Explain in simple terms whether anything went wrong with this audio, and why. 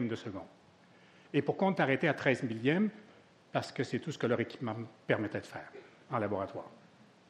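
Nothing went wrong here.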